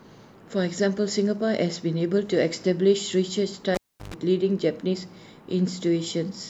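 At 3.75 s there's a classic cable pulled and plugged in event: a sharp pop as the live lead comes out, then roughly 345 ms of near silence where the speech just drops away. As the plug goes back, the tip makes contact before the sleeve grounds it, so you get about 117 ms of 50 Hz mains buzz, followed by a second pop when the connection seats and the speech returns at 4.14 s.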